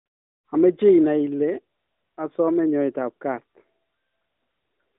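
Nothing goes wrong here; the speech comes through with the narrow, phone-line character of a mobile call, and the background drops away during the pauses just as that kind of line normally does.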